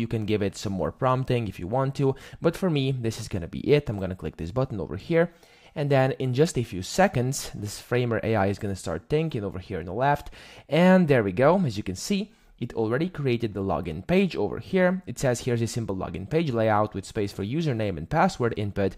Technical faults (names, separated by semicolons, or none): none